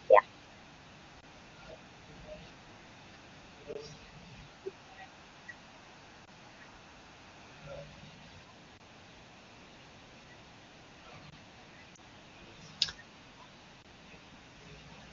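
Speech carried over AMR wideband with clear wideband sound, but it is interrupted by gaps between chunks: hard-edged silent holes of about 23 ms at 1.21, 3.73, 6.25, 8.78, 11.30 and 13.82 s. They recur every 2.5 s of audio, where separately delivered chunks meet with silence inserted. There is also one lost AMR speech frame at 11.95 to 11.98 s. Unlike the gaps, it is a soft dip or brief warble rather than true silence, because the decoder fills the missing frame by repeating the previous sound at falling level, and it does not fall on the 2.5 s grid.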